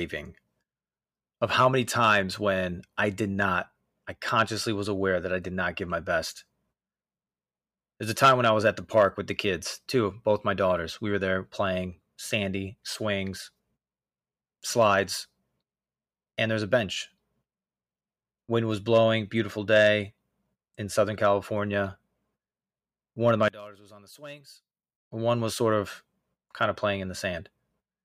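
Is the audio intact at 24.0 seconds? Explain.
No. From 23.48 to 25.11 s, after "of my" and before "one was sort of", the speech drops by about 22 dB and turns faint. The likely cause is one channel inverted. The shared centre content cancels when the channels are summed to mono.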